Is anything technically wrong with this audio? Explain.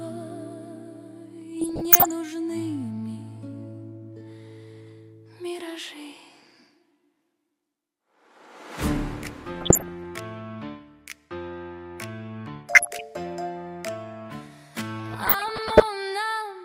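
Yes. DAB burbling appears four times: from 1.61 to 2.11 s, 9.58 to 10.05 s, 12.65 to 13.01 s, and 15.18 to 15.83 s. Each burst brings short blips of noise into the audio. Weak reception lets bit errors, at a rate of roughly 0.4 to 0.5 percent, slip past error correction into the MP2 data. Corrupted samples then put short noise blips into single sub-bands, and corrupted scale factors make individual sub-bands leap in level for up to a frame.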